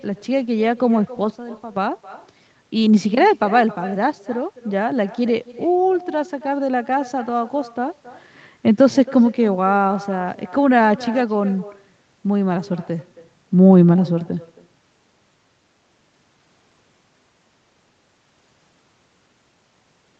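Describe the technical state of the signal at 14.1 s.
At 14.1 s, as through the whole clip, the far end is playing the call over a loudspeaker and its microphone is feeding that sound straight back with no echo canceller to remove it. The result is echo with no canceller: every stretch of speech is trailed, roughly a third of a second later, by a faint copy about 20 dB down, thin, riding over band-limited call audio that stops at 8 kHz.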